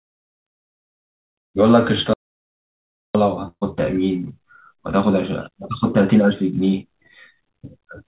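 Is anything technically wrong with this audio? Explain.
Yes, the speech has two faults, both heard through a narrowband call path that carries nothing above 4 kHz, consistent with 64 kbps G.711 mu-law.

From 2.14 to 3.15 s there is an audio dropout to silence. The speech stops mid-flow and about one second is lost, likely because the input was briefly disconnected or muted while the recorder kept writing silence. Unlike packet loss, the gap is silent with no room tone and no fading tail, and the speech returns abruptly.

From 3.48 to 3.63 s there is a burst of packet loss. About 140 ms of speech never arrived. The receiver covered roughly 134 ms by stretching the last sound and turning it down, which becomes a held buzz on voiced speech or a fading hiss otherwise, with about 60 ms of it silent, before the resumption further on. The decaying, smeared fill distinguishes it from the clean, abrupt cut of the earlier dropout.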